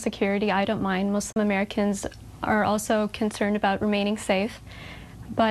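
A digital broadcast dropout mutes the audio from 1.32 to 1.37 s, with an 8 ms fade into a 32 ms silent hole, consistent with one lost frame; waveform and spectrogram show a brief blank gap.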